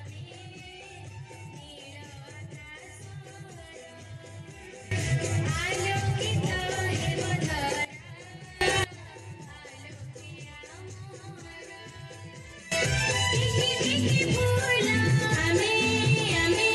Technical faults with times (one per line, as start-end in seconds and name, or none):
4.91-7.85 sudden gain jump
8.61-8.84 sudden gain jump
12.72-16.75 sudden gain jump